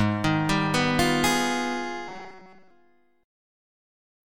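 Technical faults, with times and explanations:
2.08–2.70 s, robotic sound from repeated short buffers: a stiff metallic buzz at 188 Hz, likely a roughly 5 ms chunk looping while most fresh audio got skipped.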